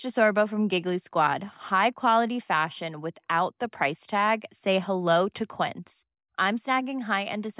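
There are no technical faults to describe in this speech at any point in time.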